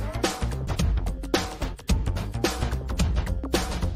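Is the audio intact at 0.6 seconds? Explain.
Yes, the audio is intact at 0.6 seconds, with no dropout, click, distortion or other fault at that moment.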